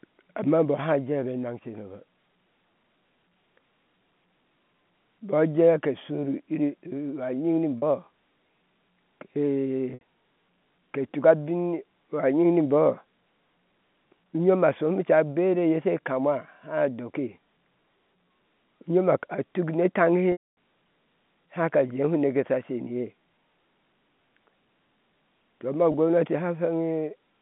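Packet loss with pitch repetition occurs at 7.78 s (40 ms), 9.94 s (70 ms), 20.32 s (250 ms) and 25.92 s (20 ms), just after "to ma". The receiver loops the last pitch period. Short gaps sound held and buzzy. The longest fades to silence.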